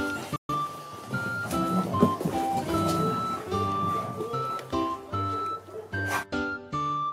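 At 0.36 s there's a digital broadcast dropout: the receiver lost good frames and muted, so the sound snaps off with a very quick fade and returns around 0.54 s.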